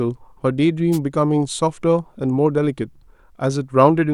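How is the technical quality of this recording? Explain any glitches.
The recording has one glitch: a wireless microphone noise hit from 0.92 to 0.99 s. Reflections briefly cancelled the FM radio signal, so receiver noise surged into a short swish of static over the speech. Unlike a digital dropout, hiss covers the sound rather than leaving silence.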